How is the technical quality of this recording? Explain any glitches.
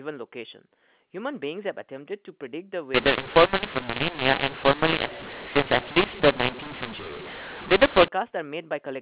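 The recording is narrowband telephone speech that sounds like G.711 A-law at 8 kHz, so nothing above 4 kHz comes through. It has one serious fault.

From 2.94 s to 8.08 s there is a mu-law and A-law mix-up. The A-law stream is being decoded as mu-law. The two laws map 8-bit codes to levels along different logarithmic curves, so every sample lands at the wrong amplitude: some too loud, others too quiet, and near-silent codes jump well above zero. The speech turns harsh and gritty, and the pauses fill with a steady hiss.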